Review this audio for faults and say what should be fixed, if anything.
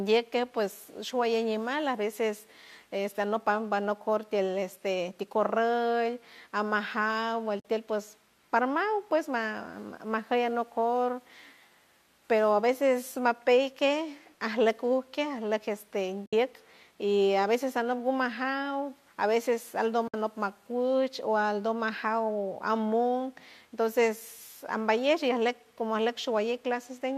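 The speech has three short dropouts from AAC frame loss with muting: 7.60 to 7.65 s (about 50 ms), 16.26 to 16.33 s (about 70 ms), and 20.08 to 20.14 s, right after "a veces" (about 60 ms). Each gap fits a run of lost 10 ms frames whose spectrum the decoder zeroed, so the overlapping windows fade the sound out and back in. A spectrogram shows narrow full-height blank columns with soft edges, and the waveform shows brief tapered silences. The light coding texture is likely from low-delay AAC compression at around 64 kbps. Prevent this with forward error correction or packet-loss concealment that interpolates lost frames instead of muting them.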